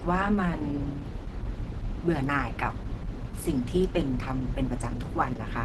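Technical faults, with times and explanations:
Throughout: Opus compression, likely. The speech sounds muffled and hoarse, with nothing above 12 kHz, which fits the codec's hybrid speech mode at roughly 16 kbps.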